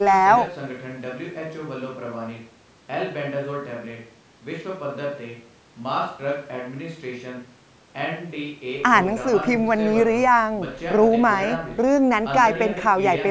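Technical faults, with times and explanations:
No technical faults can be heard; the speech carries the normal marks of a call's microphone processing, with the lowest bass trimmed by its high-pass filter and nothing above 8 kHz.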